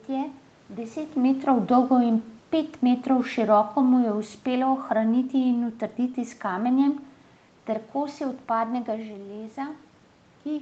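From 3.11 s, just after "metrov dolgo in pet", to 5.75 s, where "s kamenjem" begins, the automatic gain control falls. Having judged the input too loud or its background noise too strong, it lowers its gain by about 4 dB over those two and a half seconds. What separates this from the talker moving, as happens near 1 s and 9 s, is that the room noise sinks along with the speech instead of holding its level.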